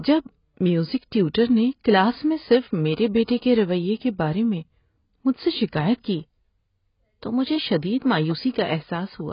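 AAC compression runs through the whole of this speech recording. Nothing is present above 5.1 kHz, and the heavy smearing and fizzy texture on sustained sounds and sibilants point to AAC-LC at a very low bitrate, likely around 16 kbps. Pre-echo appears from 3.24 to 3.28 s, between "کلاس میں صرف میرے" and "کے رویے کے بارے". A short hiss arrives about 40 ms before a sharp onset because the codec spreads quantisation noise sized for the loud attack across the quieter start of its block.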